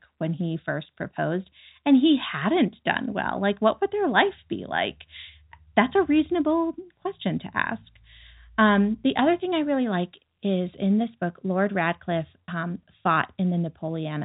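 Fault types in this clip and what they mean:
Packet loss with pitch repetition: a 30 ms gap near 12.45 s, bridged by repeating the last pitch period, showing as copied periodic cycles in the waveform and flat, held harmonics on a spectrogram.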